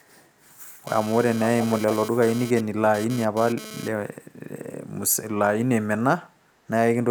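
From 0.87 s to 3.88 s there's GSM phone buzz sitting under the speech. A 2G handset close by is sending data in bursts about 217 times a second, and something in the audio chain is rectifying those radio pulses. You get a harsh, raspy 217 Hz buzz full of harmonics, about 15 dB below the speech and unrelated to it, which fits a data transfer rather than a call.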